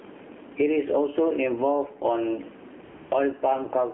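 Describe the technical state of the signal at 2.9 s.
At 2.9 s you're in the middle of an AMR comfort noise gap, running from about 2.84 to 3.12 s, so roughly 0.28 s. The phone decided nobody was talking and stopped sending speech frames, and the far end filled the hole with synthetic noise built from a rough sketch of the background's level and spectrum. You hear the real room tone, which sits about 43 dB under the speech, swapped for a smooth, steady hiss that drops in and out.

That patch sits inside the AMR narrowband mobile codec, which runs the whole clip. Everything is squeezed into a phone line, roughly 250 Hz to 3.4 kHz, with nothing above that, and the speech is rebuilt from a vocal-tract model fed a handful of pulses per frame. The buzzy, synthetic edge is plainly audible, which fits one of the lower AMR-NB rates, around 7.4 kbps.

On top of that there's gain pumping throughout. 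The level keeps swinging by something like 15 dB, so loud and soft parts get flattened together. That's most likely the input gain cranked way too high, with a fast limiter or compressor clamping down on every peak.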